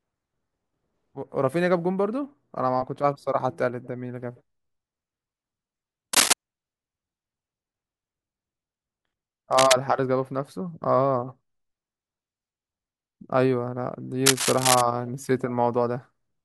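A worn cable or connector was likely disturbed, causing cable scratch noise: rough rustling bursts about 5 dB above the speech at 6.13–6.33 s, and at about speech level at 9.52–9.75 s and 14.26–14.82 s.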